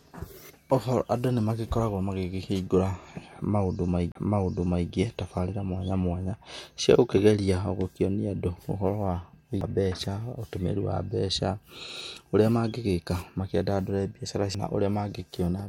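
At 4.12 to 4.15 s there is a CD skip just before "tabarĩra mwanya mwanya ciagũkĩgeria". The laser lost its place on the disc's spiral and landed on another turn. The player muted for roughly 40 ms, then resumed from the new spot. It sounds like a tick and an abrupt jump in the speech. A shorter skip follows at 9.61 s, between "gũkĩonia andũ ũhoro wa" and "mbeca ũtũmĩri wa mbeca". A third comes at 14.54 s. Both have only a few milliseconds of silence.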